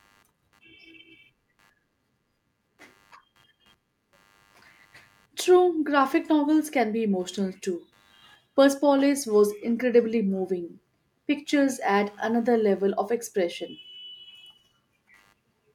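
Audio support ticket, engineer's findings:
Faint buzzy chirping under the speech, present across the whole clip, pulsing at around 100 Hz and about 45 dB below the voice. Computer activity noise: processor, graphics or mouse load shifting the shared audio ground. Tracks machine activity, not the speech.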